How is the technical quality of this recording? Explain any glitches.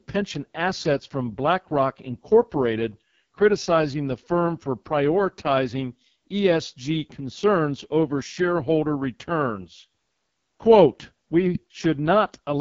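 Quality is poor throughout. The speech has been squeezed through the AMR wideband (HD Voice) codec at what sounds like its lowest 6.6 kbit/s mode, so the modelled voice comes out rough and raspy, with nothing above 7.4 kHz.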